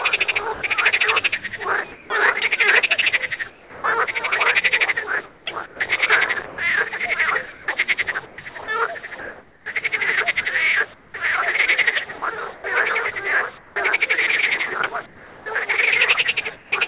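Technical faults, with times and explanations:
0.54–0.62 s, sound dropped by the voice detector: The sender's voice detector likely judged a quiet stretch to be background and stopped transmitting. About 30 ms of real sound vanishes inside an 80 ms patch of steady synthetic hiss before the sound returns.
0.54–2.1 s, comfort noise in place of the background: With no sound detected, the sender went quiet apart from occasional updates, and the receiver likely filled gaps totalling 260 ms with generated noise. The real background's texture turns into a flat, featureless hiss.
3.5–3.84 s, sound dropped by the voice detector: The detector likely misread a soft portion as background and cut transmission for 340 ms. About 130 ms of actual sound is lost, replaced by even, shapeless noise until the detector triggers again.
5.26–13.76 s, sound chopped by the voice detector: The detector likely toggled repeatedly between sending and muting, and comfort noise filled about 1.8 s in total. 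Soft edges of sounds drop out, making the audio choppy.
15.06–16.72 s, comfort noise in place of the background: Transmission paused during quiet moments, and the receiver likely substituted 560 ms of modelled noise. The natural background is briefly swapped for a smooth, detail-free hiss, heard through the call path's narrow band with nothing above 4 kHz.
15.44–15.46 s, onset clipped by the voice detector: The detector was likely slow to register that sound had resumed, so the first 20 ms went unsent and was covered by comfort noise. The sound begins abruptly, missing its soft attack.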